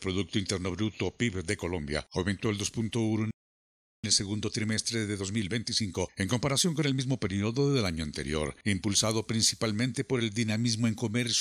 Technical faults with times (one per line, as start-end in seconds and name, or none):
3.31-4.04 playback stall
4.04-7.04 time-compressed catch-up